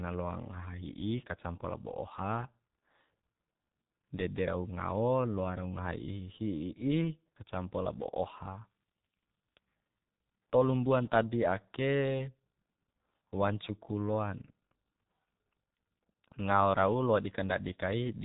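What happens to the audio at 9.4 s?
At 9.4 s the speech carries G.723.1 codec damage, present throughout the clip. Its 30 ms frames and nothing passed above 4 kHz, consistent with roughly 6 kbit/s, leave speech heavily muffled and hoarse, with smeared consonants.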